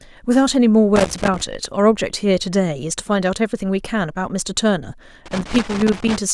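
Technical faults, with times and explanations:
0.96–1.41 s and 5.26–6.17 s, loose connector crackle. A worn contact kept breaking and remaking, chopping the speech and adding irregular scratchy crackle.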